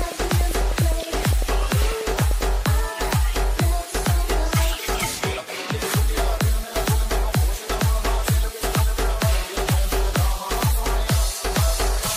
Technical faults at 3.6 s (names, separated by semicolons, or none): none